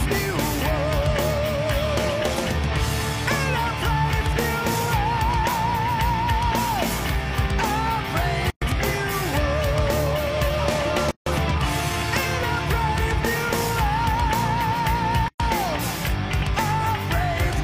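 The audio drops out three times at a gap at a join of encoded pieces: 8.50 to 8.62 s (about 115 ms), 11.11 to 11.26 s (about 154 ms) and 15.28 to 15.40 s (about 115 ms). Each piece was encoded separately and joined untrimmed, so encoder start-up delay and last-frame padding remain as silence. A waveform shows flat empty strips with smeared edges, a spectrogram full-height blank bands, and the sound resumes where it stopped.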